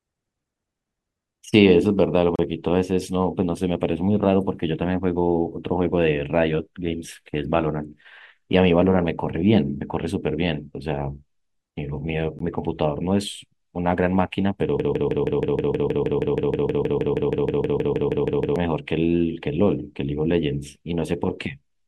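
A speech clip with two brief dropouts and a long stuck passage. The first dropout is a silence from 2.36 to 2.39 s, about 31 ms, and the second, about 16 ms, falls at 12.39 s. The sound resumes exactly where it stopped each time, with the edges smeared. Both are gaps at a join of encoded pieces. The audio was encoded in separate pieces, with joins 10 s apart, and spliced without trimming, so each encoder's start-up silence and final-frame padding remain at the seam. From 14.80 to 18.56 s the audio turns into a broken-record loop. A fragment of about 158 ms repeats back to back 24 times, and whatever should have played during those nearly four seconds is missing. The likely cause is a stall in the player, encoder or stream, which kept resending the last fragment it held instead of new audio.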